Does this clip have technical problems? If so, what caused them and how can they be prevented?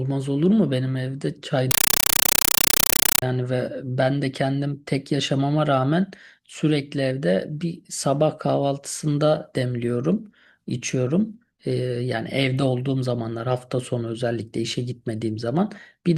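Yes. From 1.71 to 3.22 s, a compressed stream played as audio: undecoded Dolby Digital heard as loud 8 ms noise bursts, strictly regular at 31.25 per second, unlike random crackle. Prevent it by having the receiver decode the bitstream or setting the source to output PCM.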